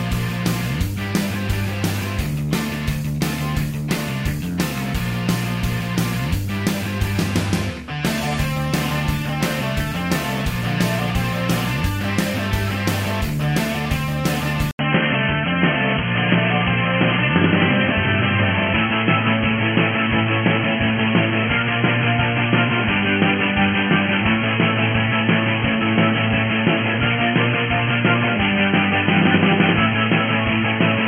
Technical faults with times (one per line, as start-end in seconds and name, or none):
14.71-31.07 input switched to a poorer device